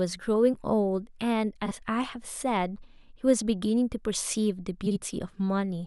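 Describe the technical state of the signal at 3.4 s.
The audio is intact at 3.4 s, with no fault in the speech signal at that point.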